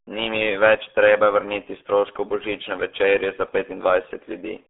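Speech runs through the RealAudio 14.4 codec throughout, fitting an 8 kbit/s dial-up coder; nothing above 3.7 kHz survives, leaving it muffled and gargly.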